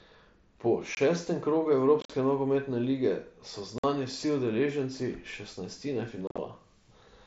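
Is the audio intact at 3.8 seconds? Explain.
No. Unconcealed Bluetooth headset packet loss cuts a hole from 3.78 to 3.84 s, between "nogometne lige so" and "vsi udeleženci šestnajstine". About 52.5 ms of speech is missing, which fits roughly seven lost packets. Nothing filled the gap. The speech stops and restarts with abrupt edges.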